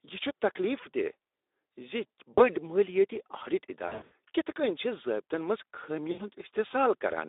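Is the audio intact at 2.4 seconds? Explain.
No. From 2.34 to 2.42 s the sound smears into a buzzy tone or coloured noise that fades. This is VoIP packet loss concealed by the speech codec: roughly 40 ms of data, consistent with two 20 ms frames, went missing. The decoder kept extending its last pitch and filter at falling gain, so the dropout is stretched rather than silent.

At this moment, as throughout, the sound is also hoarse and noisy, confined to a 300 Hz to 3.7 kHz line band. That is plain Speex codec damage at a low-rate setting, which fits roughly 11 kbps.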